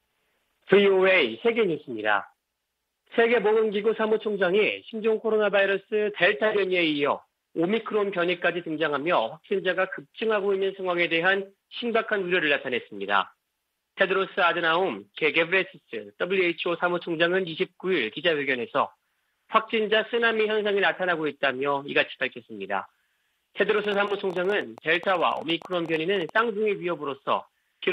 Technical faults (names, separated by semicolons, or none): train of clicks